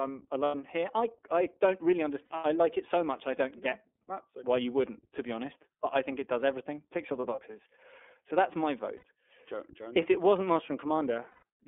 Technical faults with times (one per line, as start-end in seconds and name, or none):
0.00-11.68 iLBC codec
0.44-0.55 lost iLBC frames
2.25-2.31 lost iLBC frames
7.35-7.41 lost iLBC frames
8.97-9.03 lost iLBC frames
11.31-11.43 lost iLBC frames